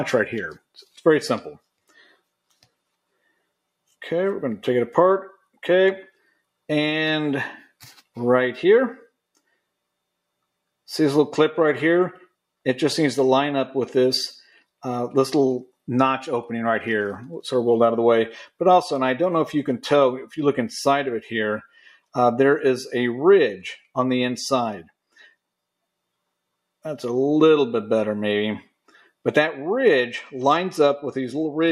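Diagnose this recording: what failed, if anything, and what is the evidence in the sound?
Call processing failed: the noise suppressor cut sound it mistook for noise at 0.58–1.01, 1.78–2.2, 21.69–22.15, 25.12–25.33 and 28.88–29.08 s, each dip lasting a few tenths of a second and dropping by about 10 to 21 dB. Unlike a dropout, the sound sinks rather than vanishing. Steady passages and decays lose level while sudden onsets come through.

From 30.09 s to the end, the codec stage shows a Bluetooth SBC bit pool drop. The treble dulls and a gritty noise rises as the upper sub-bands are starved and the rest are quantised coarsely, which fits the bit pool falling from 31 to 14, near 99 kbps. Unlike packet loss, nothing goes missing; fidelity degrades continuously.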